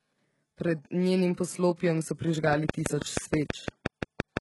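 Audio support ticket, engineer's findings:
Heavy HE-AAC compression throughout: treble rebuilt from copied lower bands, nothing above 11.5 kHz, s sounds gritty, metallic or lispy. Likely the codec, which fits roughly 12 kbps.

Train of clicks, 2.53 to 4.38 s: regular ticking, 6 per second, around ten, some 20 dB over the speech. Likely interference, a bad connection or power supply.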